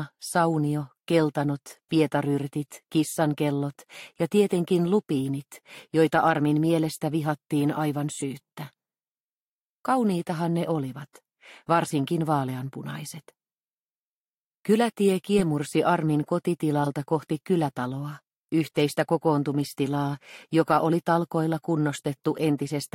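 Three short bursts of wrong-frequency energy mark this audio as having corrupt frames decoded, at 8.18 to 8.22 s, 15.38 to 15.41 s and 16.84 to 16.87 s. Each lasts roughly 30 to 36 ms, which points to a single damaged frame played with misread gains or codes. The first is quieter, the later two clearly louder. These are bursts of energy at the wrong frequencies, not a smeared repeat of earlier sound, which sets them apart from a packet-loss dropout or concealment.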